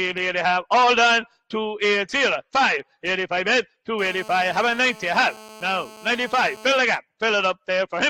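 From 3.99 s to 6.78 s a GSM phone buzz sits under the sound: a hard, raspy tone at 217 Hz, steady throughout as a phone on a call would produce, about 22 dB below the signal. A nearby 2G handset transmitting in bursts 217 times a second had its radio pulses rectified by the audio circuit. A spectrogram shows a comb of evenly spaced harmonic lines at multiples of 217 Hz across this span. The waveform carries a regular pulse train about 4.6 ms apart.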